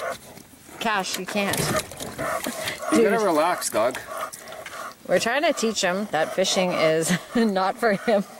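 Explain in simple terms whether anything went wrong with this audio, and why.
Nothing went wrong with this audio that a careful listener would pick out. Heard all the way along, nothing interrupts it, breaks up or changes in a way that points to a technical problem.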